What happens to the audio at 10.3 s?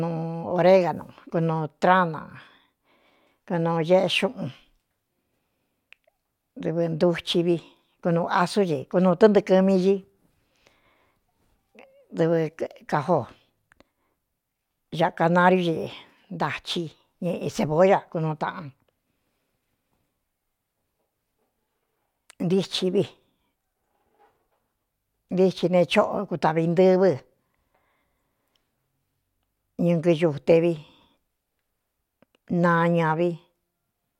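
At 10.3 s the speech continues without any audible fault.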